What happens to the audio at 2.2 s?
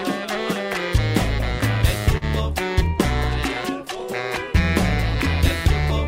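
At 2.17 to 2.24 s there is a short stall from a late packet. The jitter buffer ran dry, so the receiver stretched the preceding sound by about 40 ms until the packet arrived, then resumed without losing anything. It is heard as a briefly held sound with a slight buzz or dip.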